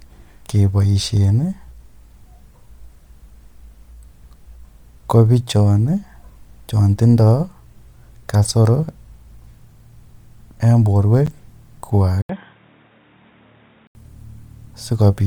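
A speech recording carries three faults. The whole clip has likely passed through Bluetooth LC3 compression, the transform codec of LE Audio, at a rate that fits about 48 kbps with 10 ms frames. The band still reaches about 20.1 kHz. The codec thins detail and fills parts of the upper spectrum with synthetic noise, so the voice has a plainly audible breathy, grainy edge from start to finish. At 11.26 s a block of digital silence appears: about 10 ms of samples were replaced with zeros, which points to the output buffer not being filled in time. The sound drops straight to nothing and returns without any fade, so the gap is heard as a sharp tick. From 12.21 s to 13.95 s the input appears to have switched to a poorer device, such as another microphone or a headset in call mode. The handover leaves about 80 ms of silence. The new path cuts everything above 3.8 kHz, so the voice turns dull and boxy. 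It is also a few decibels quieter and sits on a new noise floor some 45 dB below the signal. The fuller sound comes back when the original input resumes at 13.95 s.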